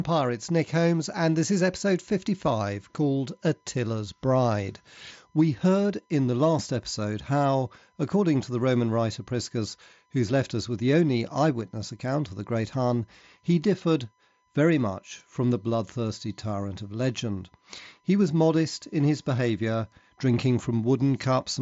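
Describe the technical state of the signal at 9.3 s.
USB whine is present at 9.3 s, as throughout the clip: current drawn in 1 ms bus frames leaks through power or ground, giving a steady 1 kHz tone about 45 dB below the speech, heard alongside the mSBC headset band-limit near 7.7 kHz.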